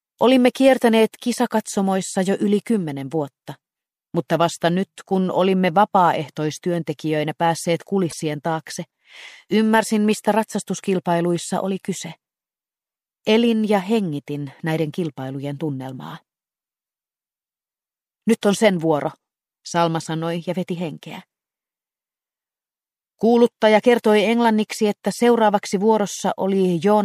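At 8.09 to 8.13 s, damaged data in the compressed stream makes the decoder misread frames and lose sync, producing a brief blip lasting about 40 ms.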